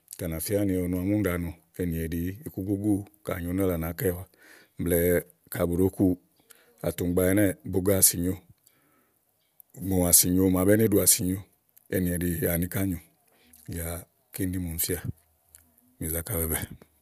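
Nothing technical stands out in this speech recording, so there's no fault to point to, no time to flag and no cause to explain.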